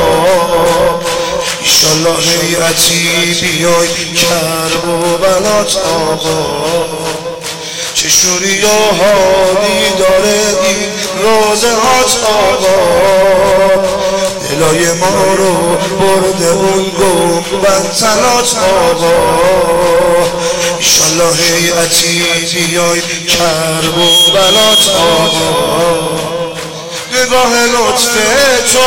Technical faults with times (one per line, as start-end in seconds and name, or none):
0.00-28.87 hard clipping